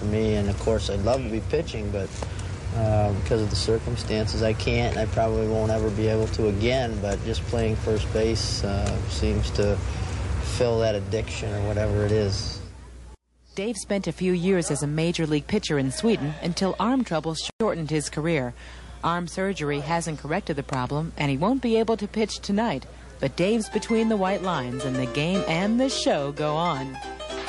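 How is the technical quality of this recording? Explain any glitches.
The technical quality is limited by clearly audible MP3 compression damage. It runs through the whole recording. The sound is watery and swirly. High-frequency detail turns metallic and chirpy, and sharp attacks smear. The likely cause is heavy MP3 compression, at a level pointing to roughly 48 kbps. At so few bits, the encoder cuts the treble above a fixed frequency. It also drops quiet frequency components. These flicker on and off between frames, producing the swirling texture.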